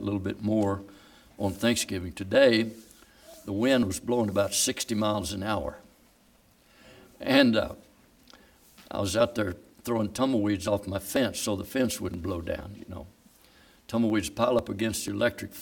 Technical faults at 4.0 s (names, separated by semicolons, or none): periodic USB or driver dropouts